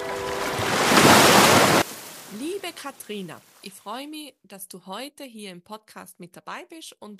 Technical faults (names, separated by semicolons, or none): one channel inverted